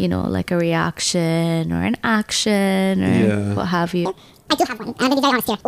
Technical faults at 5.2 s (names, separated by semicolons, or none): section at the wrong speed